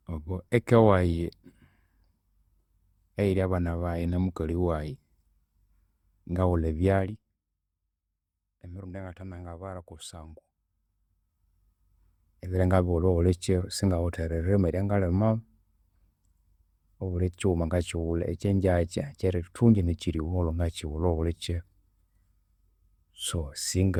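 Throughout the speech there is a swirly, hollow smear, and consonant attacks are blurred, although the top end still reaches about 20.2 kHz. Generation loss is the likely cause: the audio appears to have been run through Opus at 64 kbit/s several times over. Each pass requantised on a shifted frame grid, so noise piled up. A single encode at that bitrate would sound cleaner, and a simple low bitrate would show up as lost bandwidth rather than this watery, phasey texture.

From 6.96 to 7.40 s, zipper noise rides on the speech as the level drops by about 15 dB. It moves in 2 dB steps at roughly fifteen a second, and each unsmoothed jump leaves a small click, so the fade sounds like a fast ticking. After "emirundi eyangathe nangabara", from 10.20 to 11.68 s, the level climbs back by about 15 dB in the same 2 dB steps. These come more slowly, around five a second, so the individual ticks are easier to count.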